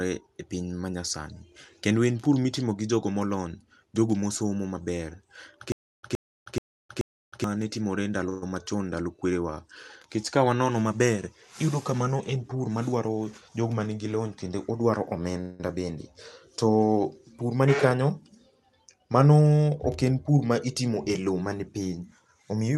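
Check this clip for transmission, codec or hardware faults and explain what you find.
Three kinds of fault are audible in this speech, which passes through a call path band-limited near 12 kHz.

Stutter with silent gaps, 5.72 to 7.44 s. A 118 ms burst repeats four times, every 431 ms, with 313 ms of digital silence between. A stalled stream replaying its last fragment is the likely cause. That stretch of audio is lost.

Call audio freeze, 8.29 to 8.43 s and 15.41 to 15.60 s. The last sound is held as a fading buzz or hiss for 127 ms, then 187 ms. The likely cause is delayed packets draining the jitter buffer. Nothing is lost, but gaps are inserted.

Jitter buffer speed-up, at three points:
12.36 to 13.50 s, at 111% speed, roughly 150 ms removed.
17.63 to 18.02 s, at 108%, about 40 ms removed.
22.03 to 22.78 s, at 112%, about 100 ms removed.

The receiver cuts short pitch-period slices to shed excess delay. 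Speech sounds hurried at unchanged pitch.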